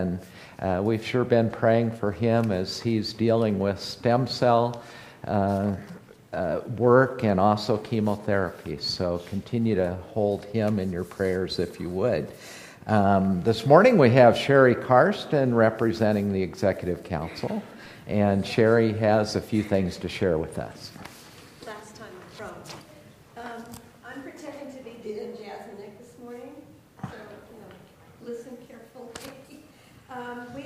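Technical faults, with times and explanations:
No technical faults can be heard anywhere in the recording, and the signal's level, continuity and frequency range stay stable and intact throughout.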